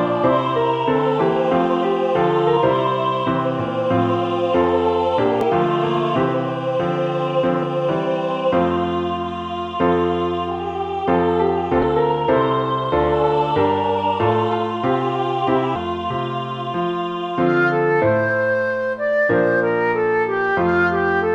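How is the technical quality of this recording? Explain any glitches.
The recording is marred by damaged data in a compressed stream, heard as brief glitches at 2.56 s, 5.41 to 5.43 s, 7.62 s, 11.82 s and 15.75 s. At each point corrupted bytes cause the decoder to misread frames and lose sync, producing a short disturbance lasting no more than about 20 ms.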